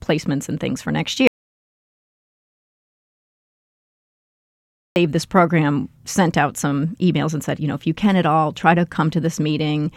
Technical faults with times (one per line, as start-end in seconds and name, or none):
1.27-4.96 audio dropout to silence